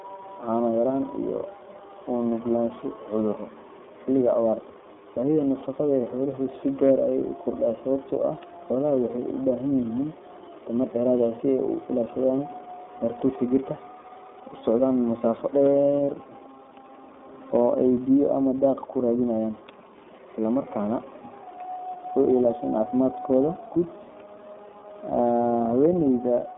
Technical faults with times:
0.00-26.57 iLBC codec
15.27 hard clipping
23.33-23.37 hard clipping
25.85-25.89 hard clipping

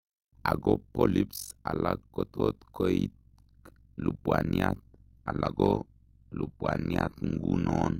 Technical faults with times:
0.00-8.00 overlap-add ripple
4.85-8.00 adaptive stream at a lower bitrate

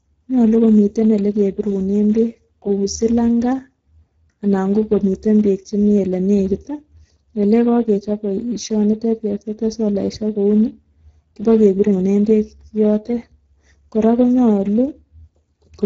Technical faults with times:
0.00-15.85 Speex codec

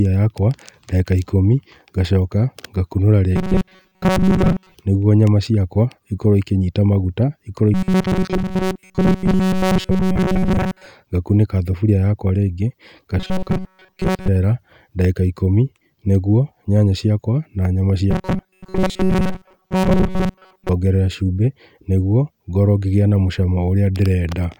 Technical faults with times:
3.36-4.74 robotic sound from repeated short buffers
7.74-10.87 robotic sound from repeated short buffers
13.19-14.28 robotic sound from repeated short buffers
18.11-20.69 robotic sound from repeated short buffers

